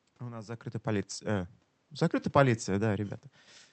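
Nothing in this speech clip stands out as a technical problem: the room's background noise and the talker drifting nearer and farther from the mic are just part of the recording, and the call path carrying it is doing its ordinary job.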